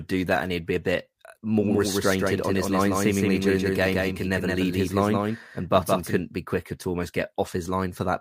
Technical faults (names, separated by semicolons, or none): doubled audio track